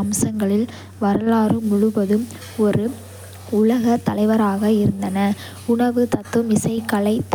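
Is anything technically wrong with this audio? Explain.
No, nothing technically wrong can be heard here.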